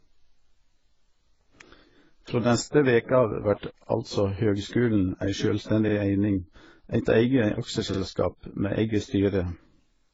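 Throughout the speech, nothing is heard above 7.6 kHz, and two kinds of codec artefacts are heard together. The likely cause is transcoding between lossy codecs, pointing to a low-rate AAC-LC encode later re-encoded as Vorbis. Unlike a single codec, the artefacts stack rather than share one character.

Overlapping chunks appear at 1.79, 3.84, 5.89, 7.94 and 9.99 s, every 2 s. Each chunk starts 50 ms before the previous one ends, so that slice plays twice, producing a short stutter. The repeated material and strict spacing distinguish it from dropouts, which remove sound instead.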